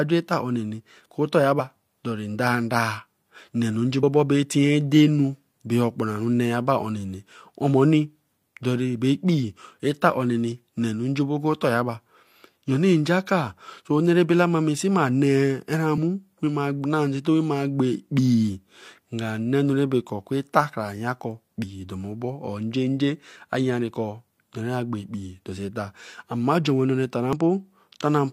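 Short chirps, squawks, clicks or holes break through the speech at 1.56 to 1.61 s, 3.99 to 4.03 s, 15.94 to 15.97 s and 27.33 s. These come from damaged data in a compressed stream: corrupted bytes make the decoder misread frames and lose sync until it finds the next frame header.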